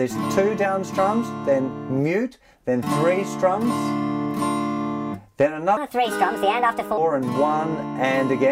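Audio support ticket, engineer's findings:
Section at the wrong speed, 5.77–6.98 s: sound turns abruptly high and hurried, about five semitones up, then snaps back. Runs 1.4x, pitch and tempo shifting together. Likely a clock-rate mismatch in the edit or player.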